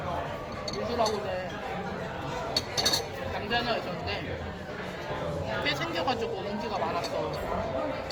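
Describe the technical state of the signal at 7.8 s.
At 7.8 s, as throughout the clip, the sound carries plainly audible damage from likely Opus compression in its CELT music mode. It fits a low bitrate near 24 kbps, where thin bands are refilled by folding or noise, so tones turn grainy and rough. A spectrogram shows fullband content reaching 20.2 kHz, with few holes but smeared, noisy band texture.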